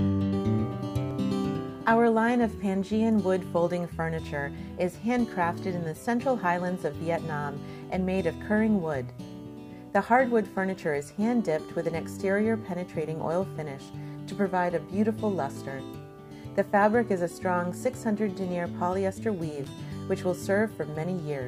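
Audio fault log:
19.64–19.76 s, loose connector crackle: a short, irregular burst of scratching lasting about 0.12 s, as a worn contact rapidly makes and breaks, chopping the signal. Its ragged, uneven texture sets it apart from a clean single digital click or a dropout's silence.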